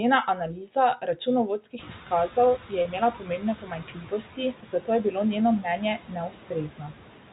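Noise suppressor artifacts run through the whole clip. The suppressor pulls steady background noise down by about 12 dB, frame by frame. The residue does not sit still. It dips in the gaps and swells back under the speech. The speech itself takes on a thin, slightly watery colour. This pumping floor is present from the first second to the last.

Speech cut by the noise suppressor first appears from 0.35 to 0.76 s. The suppressor mistakes weaker parts of the speech for noise and turns them down with the background. The drop reaches about 9 dB. It happens again from 0.97 to 1.27 s, at about 10 dB. The affected sounds come across swallowed and faint. In each span, soft edges and endings go missing before the level recovers.

Noise suppressor catching up follows from 1.78 to 1.96 s. The room noise jumps by about 20 dB at around 2 s, and the suppressor's noise estimate trails behind it. For about 180 ms the louder noise comes through with only about 8 dB of reduction. 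Then it sinks as the estimate settles. Overlapping this, another speech cut runs from 1.59 to 2.10 s, reaching about 11 dB.

Speech cut by the noise suppressor returns from 2.62 to 4.20 s. This is the longest stretch, with drops of about 12 dB scattered through it. Against the raised noise floor, quieter syllables are pushed down into the background. They sound swallowed and faint.

Packet loss with pitch repetition occurs at 2.82 s, inside that stretch. About 30 ms of audio is missing, which fits a single lost packet. The receiver fills the gap by repeating the last pitch cycle. The result is a brief, held, buzzy tone.

Speech cut by the noise suppressor continues in the second half. From 4.55 to 4.88 s, just before "je bilo njeno mnenje", the level drops by about 12 dB. From 6.29 to 6.51 s, just after "je bilo njeno mnenje", it drops by about 11 dB. A final cut from 6.69 to 6.93 s also reaches about 11 dB. 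Each leaves a short stretch faint and clipped at the edges. The telephone band stops at 4 kHz throughout.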